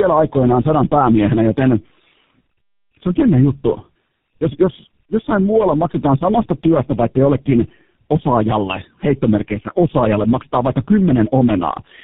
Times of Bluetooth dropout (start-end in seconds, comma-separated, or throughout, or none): none